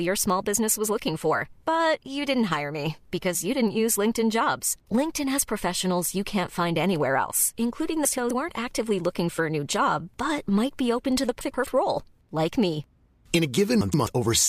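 Speech with three short bursts where frames are out of order, at 8.05 to 8.31 s, 11.41 to 11.67 s and 13.81 to 14.07 s. Each time, two adjacent 128 ms blocks, consistent with runs of about four frames apiece, were decoded in swapped order. The audio briefly flutters and garbles. Unlike packet loss or a dropout, there is no gap, mute or concealment smear, and no time goes missing.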